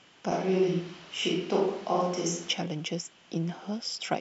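From 0.31 s to 2.53 s the speech abruptly turns roomy and hollow, with thinner bass, then snaps back just as suddenly. This is a switch to a distant microphone, likely because the close microphone's signal dropped out and a farther one took over. Loudness barely changes, but room noise rises to roughly 25 dB below the speech. A spectrogram shows weakened low frequencies, smeared reverberant tails and a raised noise floor between syllables, with hard edges at both switch points.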